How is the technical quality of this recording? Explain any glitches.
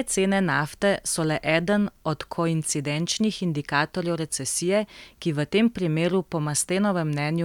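Good news, there's nothing to explain here, since the speech comes through without a single glitch anywhere in the recording.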